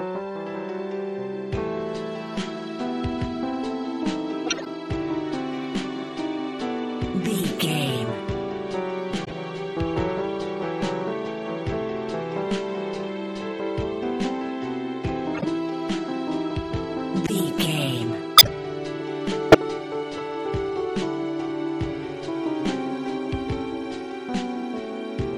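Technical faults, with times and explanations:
4.46 to 19.55 s, corrupt frame decoded: bursts at 4.46–4.67, 9.24–9.32, 15.34–15.44, 17.27–17.30, 18.36–18.47 and 19.51–19.55 s chirp and squeak as damaged compressed frames play anyway. Misread gains and codes throw energy to wrong frequencies, peaking near about −5 dBFS by 18.4 s.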